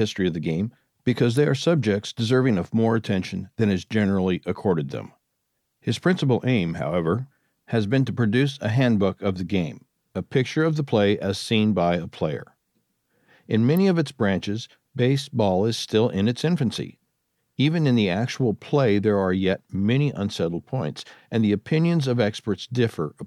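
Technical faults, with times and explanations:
13.77 s, electrical switching spike: a single sharp snap, over in a few milliseconds, sitting on top of the sound rather than replacing any of it. It peaks at roughly -25 dBFS, so it's a quick, modest tick rather than a loud crack. That shape, one tight burst with nothing around it, is likely a nearby switch, motor or static discharge arcing briefly and the audio line picking up the pulse.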